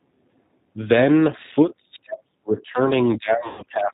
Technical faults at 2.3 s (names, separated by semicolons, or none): G.729 codec; speech suppressed in double talk